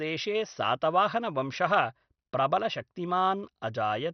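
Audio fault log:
throughout, MP2 compression: The speech is dull and stops abruptly above 6.2 kHz. A gurgling, granular roughness runs through the speech. High bands seem to switch on and off, so the top end flickers. The likely cause is MPEG Layer II coding at a starved bitrate, which fits about 48 kbps. With so few bits, the upper sub-bands are dropped entirely. The remaining bands are quantised coarsely, and that produces the grain.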